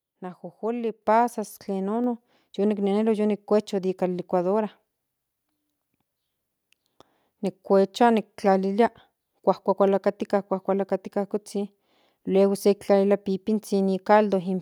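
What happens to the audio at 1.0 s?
At 1.02 s the microphone volume steps up. The call software judged the input too quiet and raised the device's gain in a single step of about 5 dB. Speech and background noise jump louder together, instantly, and stay at the new level.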